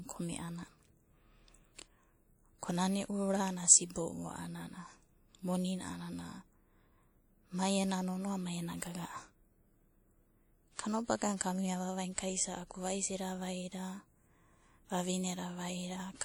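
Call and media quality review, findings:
Ringing, washy hiss breathing with the speech throughout; top end reaches 20.1 kHz, so not band-limiting. Likely WMA compression; the plainly audible damage fits a low bitrate near 48 kbps.

Pre-echo, 10.74–10.79 s: about 47 ms of hiss before a sharp attack, blunting it. Transform block spreads quantisation noise backwards; precedes the onset, unlike trailing reverb or ringing.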